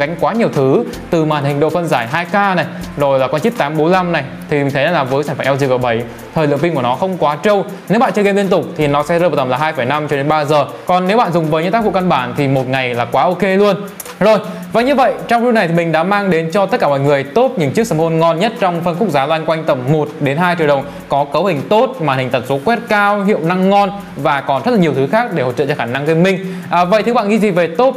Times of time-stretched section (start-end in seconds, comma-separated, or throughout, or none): none